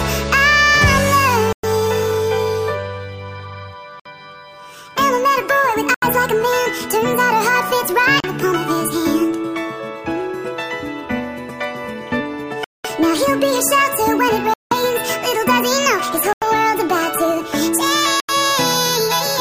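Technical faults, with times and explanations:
1.53–1.65, 4.00–4.06, 5.94–6.03, 8.20–8.29, 12.64–12.86, 14.54–14.73, 16.33–16.43 and 18.20–18.31 s: Bluetooth stall. The sound cuts to silence for 36 to 203 ms, then resumes. Interference likely delayed packets, emptying the headphones' buffer.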